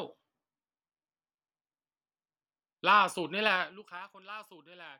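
From 3.44 to 4.04 s, a ticking, zipping texture rides on the speech as its level falls by roughly 20 dB. This is zipper noise: the gain drops in unsmoothed steps of about 3 dB, around ten a second, and each step leaves a small click.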